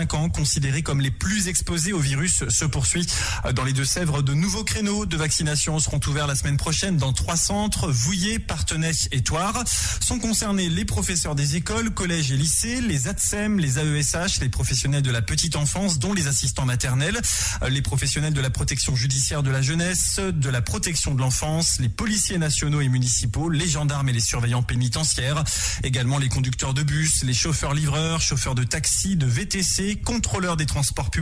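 No technical faults can be heard anywhere in this clip.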